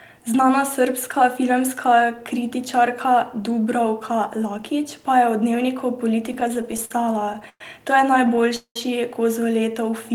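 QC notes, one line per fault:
6.26–7.61 s, repeated stalls (stutter) after "pa je v dnevniku": fourteen brief hold-ups, longest 110 ms, as late packets drained the jitter buffer and the last sound was stretched.
8.27–8.76 s, repeated stalls (stutter): five gaps filled by continuing and fading the last sound, longest 195 ms and covering almost half this span, so delivery drags audibly.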